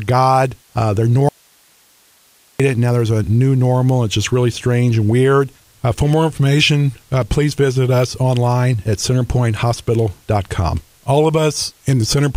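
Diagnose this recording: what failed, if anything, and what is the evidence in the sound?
There's an audio dropout to a faint residue from 1.29 to 2.60 s: the sound cuts abruptly, leaving only hiss about 40 dB down for roughly 1.3 s, then snaps back. The path stayed live, so likely an intermittent analogue connection momentarily losing the source.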